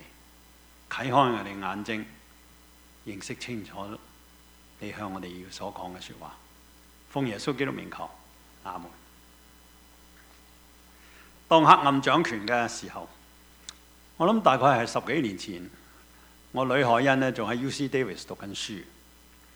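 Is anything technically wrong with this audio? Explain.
No, nothing is technically wrong with this audio.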